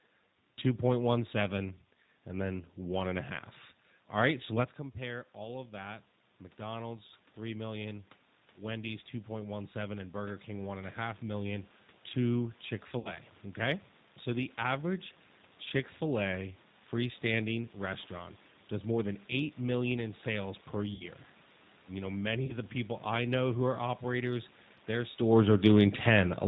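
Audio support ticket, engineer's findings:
G.729 codec, whole clip: speech band-limited to 4 kHz, rough and slightly synthetic. Points to an 8 kbit/s G.729A stream rebuilding speech from a vocal tract filter, pitch predictor and sparse pulses. The roughness inside the band rules out a simple low-pass filter.

Automatic gain rising, 4.98–11.77 s, after "right so let's": level swells gradually by about 9 dB over several seconds, compensating an input drop of about 13 dB that starts when the talker leans away near 4.5 s. AGC raising gain. Background noise rises with the voice, which rules out talker movement alone.

VoIP packet loss concealed by the speech codec, at 12.99–13.16 s, 20.94–21.05 s after "million in sales per", and 22.46–22.57 s before "the people I know": speech smeared into a fading buzzy tone or coloured noise, weak for a moment after. The gaps are 60 ms, 60 ms and 30 ms, which fits 30 ms packets. 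The decoder extrapolates from its last pitch and filter state. The sound filling each gap sets this apart from a plain dropout or a clipped edit.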